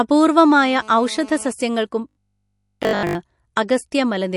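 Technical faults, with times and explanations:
Throughout, MP3 compression: the speech has plainly audible codec damage, with a watery, swirling quality and dulled treble. Thin frequency content flickers in and out between frames and consonant attacks smear, which likely points to a low bitrate around 48 kbps.
0.59 to 1.52 s, GSM phone buzz: a hard, raspy buzz at about 217 Hz with dense harmonics sits about 23 dB below the speech and holds steady throughout. This fits a nearby 2G phone on a call, its transmit bursts rectified by the audio circuitry.
2.09 to 3.15 s, robotic sound from repeated short buffers: the speech becomes a rigid, metallic 50 Hz buzz that loosely follows the speech contour, with essentially all of the audio replaced by repeats. This is likely caused by a 20 ms block being replayed while fresh audio fails to arrive.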